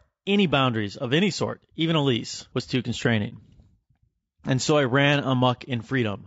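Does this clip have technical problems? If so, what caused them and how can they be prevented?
Yes. Throughout the speech the voice sounds rough and grainy, with a hiss-like haze between the harmonics and a thin, somewhat synthetic top end. This is plainly audible codec damage, likely from low-delay AAC compression (AAC-ELD), which fits a bitrate around 32 kbps. Its very short frames resolve pitch harmonics poorly, and at this bitrate too few bits remain to code them cleanly. Raising the bitrate, or using a longer-frame codec where delay allows, would prevent it.

From 3.29 to 3.33 s, just after "a lease was too", the sound drops into a brief, soft-edged gap. This is AAC frame loss with muting, which fits a single lost frame of about 30 ms. The decoder replaced that frame's spectrum with silence, and the overlapping windows faded the sound out and back in around the hole. Packet-loss concealment or forward error correction on the transport would prevent it.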